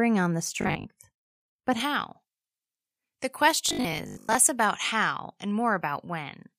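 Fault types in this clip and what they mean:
Robotic sound from repeated short buffers: A rigid, metallic buzz at 50 Hz appears from 0.61 to 0.91 s, right after "on the", and again from 3.69 to 4.35 s. A 50 Hz buzz means a 20 ms stretch of audio was looped, likely because new audio reached the playback side too slowly. About half of the first passage and roughly 70% of the second is recycled material, so parts of the speech are skipped.
Pre-emphasis left on: From 1.8 s to the end, the treble stands out strongly, about 11 dB higher at 10 kHz than at 1 kHz. The high-frequency boost applied for recording or transmission was never reversed by the matching de-emphasis, and the shape of the tilt fits a J.17 curve. The speech sounds thin and bright, with exaggerated sibilance and too little body.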